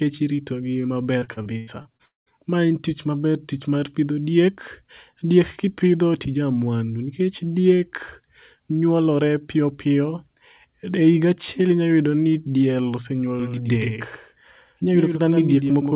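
Speech recorded over a call link, band-limited with nothing above 4 kHz, which fits a G.711 mu-law codec at 64 kbps. Just after "irito gi", from 1.19 to 2.02 s, repeated packet loss (robotic sound) breaks the audio up: seven separate gaps, the longest 96 ms, are patched by extending the preceding sound, so about 31% of that stretch is concealment and it comes out choppy. Immediately after, from 2.05 to 2.29 s, the sound stops entirely, with a short fading continuation and then 160 ms of silence before the audio resumes with that portion missing, most likely a long network dropout. From 13.40 s, right after "achiel inyayudo ni diel", to the end of the clip, a doubled audio track appears: a full-band second copy, a few dB quieter and trailing by about a tenth of a second, starts abruptly and has no reverberant tail.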